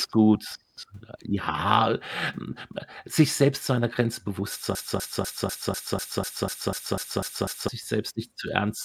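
From 4.75 to 7.68 s the speech falls into a broken-record loop. A 247 ms fragment repeats twelve times, likely from a stalled stream, and the speech behind it is lost.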